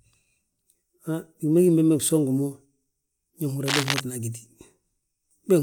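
A speech recording with a burst of cable scratch noise from 3.66 to 4.01 s, a rough rustling almost as loud as the speech, likely from a worn cable or connector being moved. On a spectrogram it appears as dense, irregular broadband streaks; the waveform shows jagged spikes.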